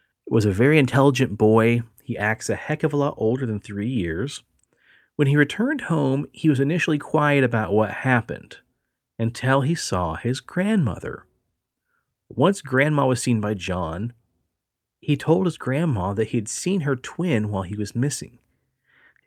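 No technical faults can be heard at any point in the speech.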